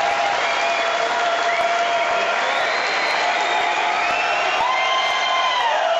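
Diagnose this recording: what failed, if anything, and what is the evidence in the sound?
What failed is clock drift between sender and receiver, and it sits at the network jitter-buffer stage. All the way through the clip you get small timing hiccups at uneven intervals, little skips where a sliver of sound goes missing. The sending clock runs fast, by something like 5 percent, so audio arrives quicker than the receiver plays it. The buffer keeps overfilling, and the receiver keeps dropping short chunks to catch up.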